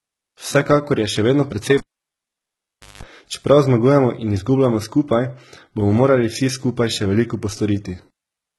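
HE-AAC compression runs throughout the speech. Nothing remains above 11.8 kHz, and the upper band has the synthetic brightness of spectral band replication: lower bands are copied upward and shaped with a coarse envelope instead of being coded directly. Harmonics no longer line up across the crossover, so sibilants sound gritty and metallic. The heavy damage fits a very low bitrate of around 16 kbps, and a likely HE-AAC v2 encode.

Cable pulled and plugged in occurs from 1.78 to 3.03 s, just after "je še vedno precej". A pop marks the cable leaving its socket, and the signal then falls to near silence for about 1.2 s. While only the tip touches, without a proper ground, a burst of 50 Hz mains buzz lasting about 190 ms gets through. A second pop follows as contact completes and the sound returns at "čeprav zmagujemo in izgubljamo".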